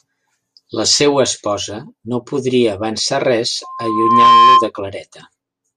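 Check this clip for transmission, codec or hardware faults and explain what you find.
One fault: loudspeaker feedback squeal, from 3.63 to 4.71 s. A microphone is picking up the loudspeaker it drives, and at 1 kHz the loop gain exceeds one. That tone feeds on itself, swelling over most of a second into a steady squeal that ends up roughly 10 dB louder than the speech.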